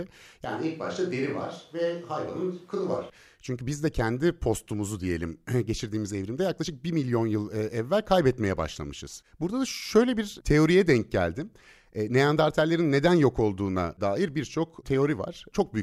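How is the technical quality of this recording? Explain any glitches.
The recording has one clear fault, near the start. From 0.45 s to 3.10 s the speech turns roomy and hollow, loses low end and drops by about 5 dB, while room noise rises to roughly 35 dB below the speech. Both transitions are abrupt. The cause is likely a switch to a distant microphone. The close mic's feed dropped out and a farther pickup, hearing more room reflection and less of the source's bass, briefly took over.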